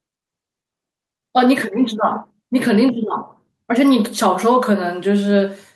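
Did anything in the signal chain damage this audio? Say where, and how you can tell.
No, nothing damaged this audio.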